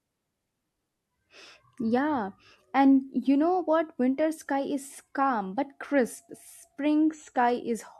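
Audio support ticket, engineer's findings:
No faults found: the speech signal is continuous and stable, with no audible defect at any point in the recording.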